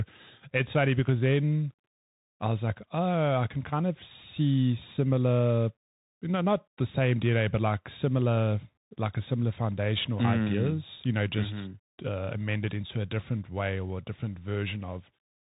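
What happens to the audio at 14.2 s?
Bluetooth CVSD headset codec damage is present at 14.2 s, as it is through the whole clip. This narrowband codec sends a single up-or-down bit per sample and adapts its step size, which fits a 64 kbps link. Nothing above about 3.8 kHz survives, so the speech sounds muffled and boxy. Loud high-frequency sounds outrun the step size and distort, s sounds turn scratchy, and a plainly audible granular hiss sits beneath the speech.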